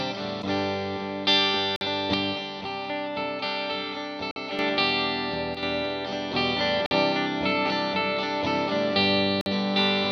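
At 1.76 s the first gap between chunks appears, a 50 ms hole of silence with hard edges on both sides. The same gap returns at 4.31, 6.86 and 9.41 s, after each 2.5 s block of sound. That steady spacing points to audio delivered in chunks, with each chunk starting late or padded at its join. The sound itself is intact but broken at every boundary. On a waveform each gap is a flat near-silent strip, and a spectrogram shows a clean full-height dark vertical band.

From 2.14 s to 4.59 s the level falls abruptly by about 6 dB and stays down. The sound steps back up at the end. The same drop returns briefly from 5.55 to 5.63 s. This is most likely one channel dropping out, so only one channel is still feeding the mono sum. The waveform envelope shrinks to about half height across those spans, and the spectrogram darkens evenly at all frequencies rather than in any one band.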